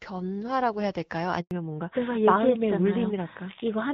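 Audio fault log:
1.41–1.51 s, handover gap: the sound fades out within a few tens of milliseconds and stays silent for 100 ms while the call is passed from one network to another and no speech frames arrive. The fade and the clean silence set it apart from a dropout caused by packet loss. Packet loss tends to leave stutters, repeated fragments or concealment noise. Here the missing stretch is simply gone.
1.51 s to end, fallback to narrowband: right after the gap, everything above 4 kHz disappears and the sound turns dull and rougher. This points to the call dropping from HD Voice to a narrowband codec, which fits AMR-NB at its top rate of 12.2 kbit/s. Before 1.51 s the band reaches up to 7 kHz, with only light coding damage, which fits AMR-WB at 12.65 kbit/s. The change from wide to narrow happens at the gap and stays for the rest of the clip. That step and the hard 4 kHz ceiling set it apart from a gradual low-pass effect or a bitrate dip inside the same codec.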